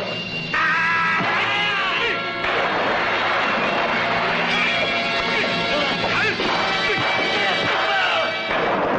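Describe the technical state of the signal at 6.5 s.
At 6.49 s there is a single abrupt discontinuity: the sound jumps forward, with no gap of silence. It is consistent with a dropped buffer (overrun), likely from the capture side failing to read its samples before the hardware overwrote them. Roughly 20 ms of audio is missing, and the material on either side is butted together directly, so the content skips ahead.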